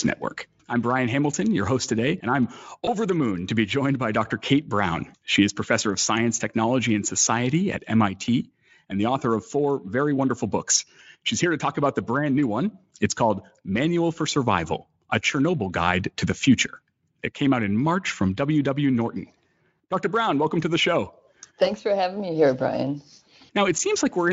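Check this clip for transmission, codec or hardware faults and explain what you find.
One transmission fault appears, a VoIP packet loss concealed by the speech codec, at 2.85 to 2.90 s, between "host today and I'm" and "the moon to be". About 20 ms of audio, which fits a single lost packet, never arrived. The decoder filled the gap by carrying forward its last pitch and spectral shape at falling gain. The result is a brief smeared stretch, a buzzy tone or coloured noise that fades. Because each decoded frame leans on the one before, the speech stays weak or distorted for tens of milliseconds or more after about 2.90 s. The Speex coding elsewhere adds little or no audible damage.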